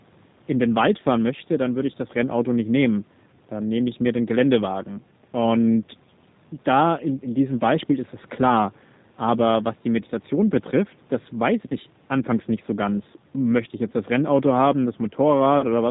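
Throughout, a G.729 codec rebuilds the speech from a vocal tract model and sparse pulses, removing everything above 4 kHz and making it plainly rough and synthetic.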